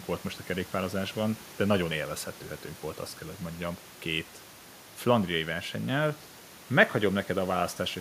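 No technical faults can be heard in the speech.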